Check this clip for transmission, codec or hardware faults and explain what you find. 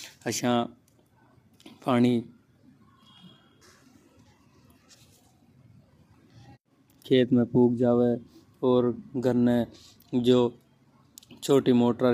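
One codec fault runs through the whole speech clip. Throughout, likely low-delay AAC compression: short AAC-ELD frames resolve pitch harmonics poorly, leaving the speech audibly rough and grainy, consistent with roughly 32 kbps.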